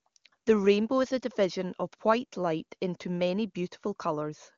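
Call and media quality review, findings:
Nothing stood out on listening to this speech clip over the AMR wideband (HD Voice) path.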